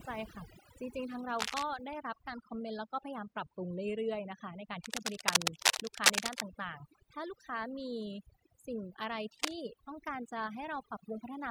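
Overdone noise removal runs throughout: bands near the noise floor are switched off, leaving silent gaps flecked with twinkling specks, unlike a codec's steadier smearing. Cable scratch noise, likely from a worn connector being moved, adds dense rustling bursts, not isolated clicks, at 1.38 to 1.63 s (roughly speech level), 4.84 to 6.42 s (well above it) and 9.38 to 9.53 s (somewhat above it).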